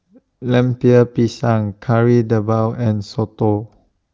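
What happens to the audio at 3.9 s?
Nothing goes wrong at 3.9 s; the speech there comes through intact, with the AMR wideband (HD Voice) coding leaving at most faint damage at that point.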